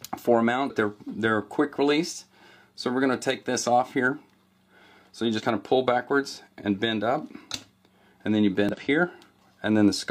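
Damaged data in the compressed stream at 0.65–0.70, 5.34–5.41 and 8.69–8.75 s: corrupted frames make the decoder lose sync and hunt for the next header, leaving a brief chirp, squawk, click or short hole.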